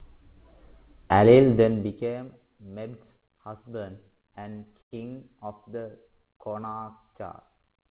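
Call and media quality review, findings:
Zipper noise, 1.48 to 2.29 s: ticking that rides on the speech while the level drops by about 20 dB. The gain is stepping in coarse jumps, around 200 a second, with no smoothing. Probably the volume/gain stage.

Repeated stalls (stutter), 4.01 to 4.94 s, ending just before "of the": 13 short hangs where the last sound gets stretched, 210 ms in total and the longest 90 ms. Nothing is lost; it just drags. The jitter buffer kept running dry as packets arrived late.

Jitter buffer slow-down, 6.09 to 6.85 s, right after "of the": the speech slows to 89% speed at unchanged pitch, stretching the stretch by 90 ms. The receiver repeated pitch periods to rebuild its reserve.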